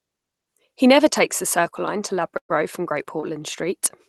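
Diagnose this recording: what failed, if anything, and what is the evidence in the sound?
From 2.37 to 2.51 s the speech turns into a held, fading continuation of the last sound and then drops to near silence, resuming with about 120 ms missing. This is a burst of packet loss on the network: the jitter buffer extrapolated, then muted.

At 3.03 to 3.06 s and 3.20 to 3.24 s there are brief smears where roughly 20 ms of speech is replaced by extrapolated sound before blending back. These are short concealed packet losses, each papered over by the receiver's loss concealment in the call path.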